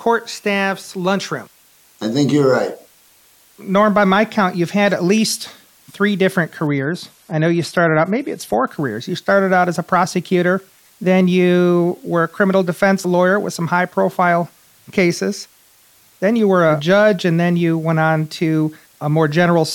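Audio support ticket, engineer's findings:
Low bit depth with dither, throughout the full clip: constant, even hiss under the speech, roughly 35 dB below the signal, no distortion. Noise level fits an 8-bit signal, dithered before rounding, so quantisation error becomes steady white noise.

Adaptive stream at a lower bitrate, 6.67 to 8.67 s, right after "at least three different": abrupt loss of air, nothing above 14 kHz, more codec artefacts, no gap. Points to the AAC player dropping from about 96 to 48 kbit/s during a connection slowdown.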